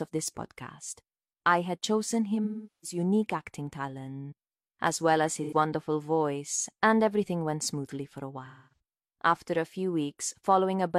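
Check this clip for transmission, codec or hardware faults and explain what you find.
There's one fault here, repeated three times: AAC frame loss with concealment, at 2.44–2.98 s, 5.43–5.53 s and 8.46–8.79 s. The decoder lost frames and patched the gaps from the last good spectrum, so each stretch sounds smeared, noisy or phasey. The first and third gaps are the longer ones.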